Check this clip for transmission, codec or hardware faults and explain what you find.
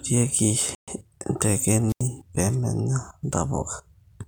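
Two faults stand out in this speech clip. One is a playback stall and the other is a radio squelch dropout.

From 0.75 to 0.88 s the sound cuts to silence for about 0.13 s, then carries on. This is likely a Bluetooth stall. Packets were delayed on the wireless link and the headphones' buffer emptied. Playback had nothing to play until the late packets arrived. The gap is clean, and the speech resumes abruptly.

From 1.88 to 2.03 s there is a wireless microphone squelch dropout. Here the trouble is at the microphone's radio link, not the listening end. The FM signal weakened, noise rose, and the receiver's squelch muted the output for about 86 ms. You hear hiss swell briefly before the hole. Near-silence follows, then the speech returns. It is the noise lead-in that sets this apart from the earlier stall.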